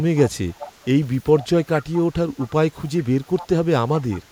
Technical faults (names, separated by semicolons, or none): echo leak